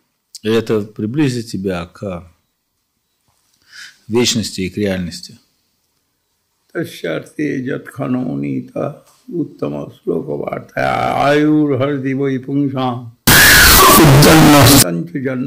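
From 13.27 to 14.83 s the audio shows a float read as integer fault, likely 32-bit float samples being read as 32-bit integers. The sign and exponent bits then set each value, so the waveform turns nearly square at an almost constant high level, very loud and harsh, with background noise raised to the same level as the main sound.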